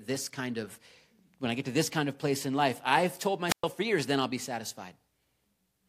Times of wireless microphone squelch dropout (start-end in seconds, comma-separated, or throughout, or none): 3.47-3.64